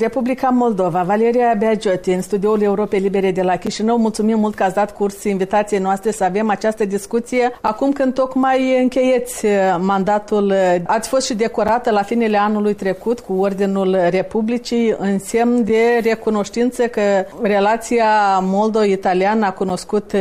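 Short holes interrupt the audio at 3.67, 7.67, 11.68, 15.69 and 19.70 s, each about 7 ms long and spaced 4.0 s apart. This is a gap between chunks: the audio was handled in 4-second pieces, and a sliver of silence was inserted at each join without removing any sound.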